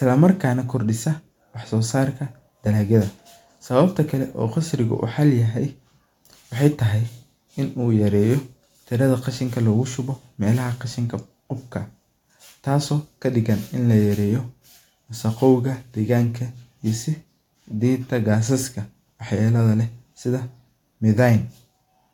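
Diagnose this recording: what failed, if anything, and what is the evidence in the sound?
Nothing failed in this recording, and the sound gives no evidence of a fault at any stage.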